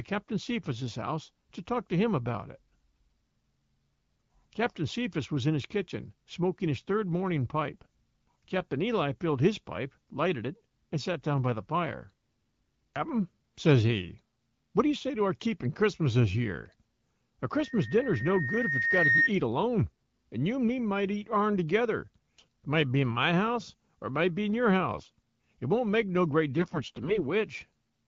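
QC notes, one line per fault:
7.74–7.86 s, 24.98–25.10 s, 26.58–27.23 s: AMR bit errors. After "smoking his third morning" and "might be in your", the sound turns briefly hoarse and gargly while pitch and level hold. Flipped low-priority bits misplace excitation pulses, unlike dropouts, which go silent.
17.53–19.30 s: loudspeaker feedback squeal. A single 1.8 kHz tone swells over roughly a second and a half, peaking about 5 dB above the speech, just before "eat alone and you". Loop gain above unity causes it, not codec distortion.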